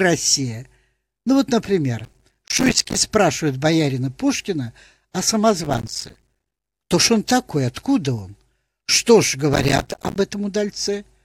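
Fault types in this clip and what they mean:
Processor overload crackle: the machine falls behind on its small audio buffers, around 5 ms each, and each one it misses drops out as a brief hard-edged silence. Dozens of these in a row turn into gritty crackle over the speech. You get three bursts here, from 2.00 to 3.01 s, from 5.64 to 6.64 s, right before "то ж он такой", and a shorter one from 9.53 to 10.16 s, each stopping cleanly once the load lets up.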